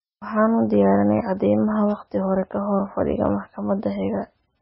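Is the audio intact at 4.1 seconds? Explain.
No. At 4.1 s, as across the whole clip, the speech bears the marks of heavy MP3 compression, likely at a very low bitrate near 16 kbps. The starved encoder has cut everything above 5.6 kHz and drops weak frequency lines frame to frame, leaving the sound dull, watery and swirly, with smeared onsets.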